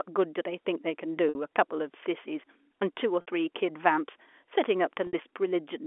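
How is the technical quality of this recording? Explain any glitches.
Three short dropouts break the speech, each bridged by packet loss with pitch repetition, carried over a G.711 telephone line limited to roughly 300 Hz to 3.4 kHz.

At 1.29 to 1.35 s, 3.21 to 3.27 s and 5.07 to 5.13 s, about 60 ms of audio went missing, consistent with two consecutive packets lost. The receiver filled each gap by looping the last pitch cycle and fading it down, then cross-fading back into fresh speech. This produces a brief, slightly held buzz where the voice should continue.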